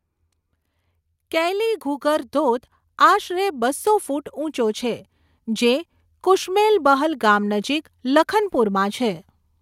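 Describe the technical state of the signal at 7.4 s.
At 7.4 s the speech signal is intact, with no fault to be heard at that point.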